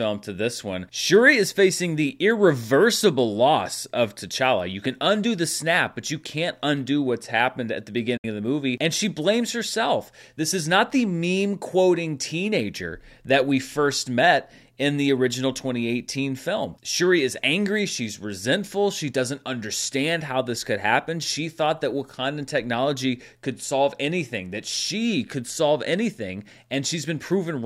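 At 8.17 s, just after "what's happened at the", the speech fades out in about 8 ms and drops to silence until 8.25 s, when it resumes with "of the movie". This is a digital broadcast dropout: the receiver stopped getting usable frames and muted. The roughly 64 ms hole fits two lost frames. It differs from concealed packet loss because nothing is smeared or repeated. The sound is simply gone, and what was sent during the gap never returns.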